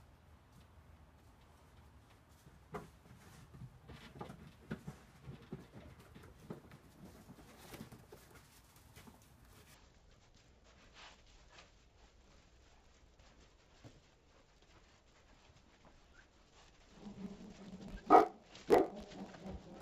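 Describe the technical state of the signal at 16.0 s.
At 16.0 s the audio suffers from interleaved audio read as planar, which runs from 9.74 s to the end at 19.82 s. Alternating left and right samples are being split in half per block. The first half becomes left and the second becomes right. Each half plays at half speed, an octave down, yet the pace holds. The blocks are short, about 20 ms. So the sound is dull and robotic, buzzing at 50 Hz.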